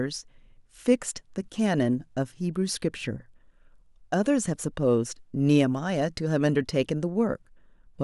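No technical faults can be heard anywhere in the speech recording; the signal stays continuous and steady throughout.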